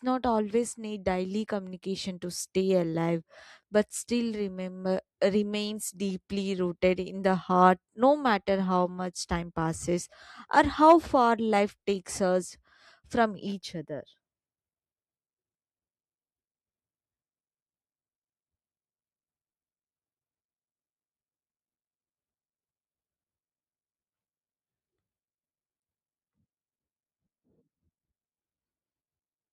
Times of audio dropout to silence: none

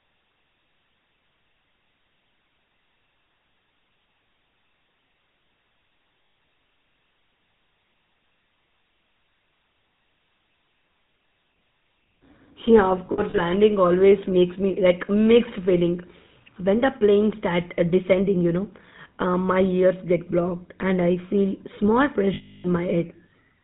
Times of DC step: none

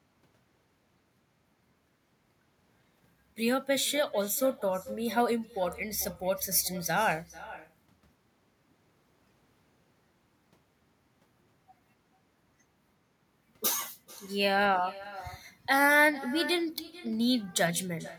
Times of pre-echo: none

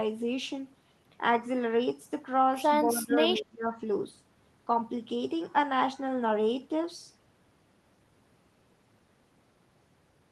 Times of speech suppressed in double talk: 2.88-3.81

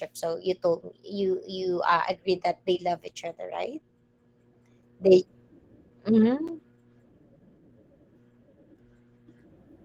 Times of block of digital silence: 3.08, 6.47

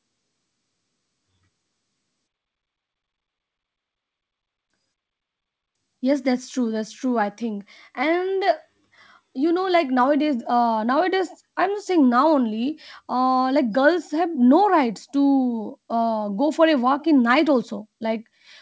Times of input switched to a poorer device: none

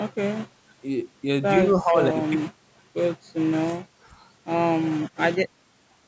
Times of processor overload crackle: none

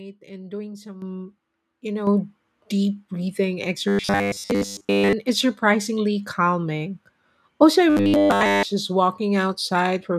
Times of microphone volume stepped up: 1.02, 2.07

